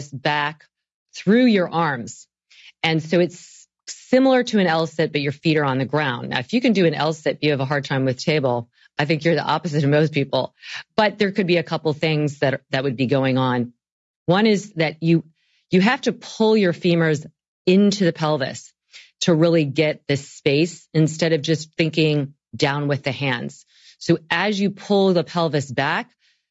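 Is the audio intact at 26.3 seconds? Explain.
No. At 26.3 seconds the speech carries the same damage heard through the whole clip, most likely from low-delay AAC compression (AAC-ELD) at a rate that fits about 32 kbps. Its short frames cannot separate the pitch harmonics finely, and too few bits remain to code them cleanly. The result is a plainly rough, grainy voice, with noise filling the gaps between harmonics, over a band that stops near 8 kHz.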